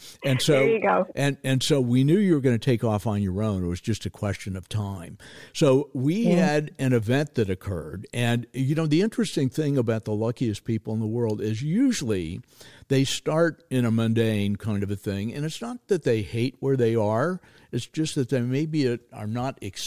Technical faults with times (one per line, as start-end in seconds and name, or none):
none